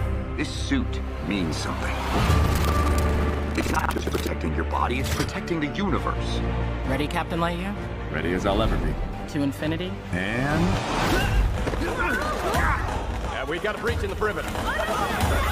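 From 2.42 to 4.30 s, the program filling the playback ring buffer and the hardware draining it slip out of step and cross inside every period, producing buffer tearing. Around two fifths of each buffer plays stale audio from roughly a tenth of a second earlier, spliced in with abrupt joins at both edges. The result is a rough, robotic rattle at 21.5 Hz, which fits a 2048-sample buffer, riding on the sound for the whole stretch.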